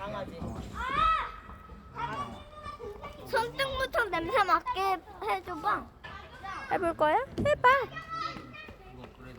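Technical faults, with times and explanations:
No technical faults are audible anywhere in this sound.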